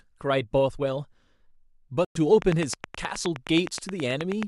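At 2.05 s the speech cuts out and returns at 2.17 s. That hole of about 107 ms is a Bluetooth dropout. Audio packets likely missed their deadline at the headphones and were discarded. The speech resumes further along, as if it had kept playing.

From 2.42 s to 4.44 s, a train of clicks runs over the speech. There are about twenty sharp, similar ticks at a steady 9.5 per second. They peak roughly 10 dB above the speech and sound through the pauses too. Electrical interference or a struggling interface is the likely source.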